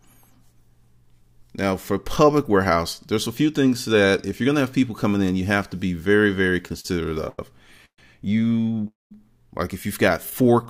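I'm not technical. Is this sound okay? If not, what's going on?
No. The sound breaks up in the second half, for two related reasons.

First, repeated stalls (stutter). The pieces of audio kept arriving a little late, so the playback ran out of material again and again and had to stretch the last bit of sound to fill in. This happens from 6.62 to 7.39 s (seven small gaps, about 0.2 s filled in total, the longest 92 ms), from 8.63 to 8.83 s (four gaps) and from 10.30 to 10.66 s (four gaps). Nothing is lost, but the audio drags and stutters.

Second, a call audio freeze, twice, at 7.85 to 7.99 s and 8.87 to 9.12 s. The likely cause is that the audio was held up on its way, so the playback had nothing left. It filled the wait with a fading trace of the last sound, then silence (about 0.09 s and 0.18 s). When the audio resumed, it picked up where it stopped, leaving a pause rather than a missing piece.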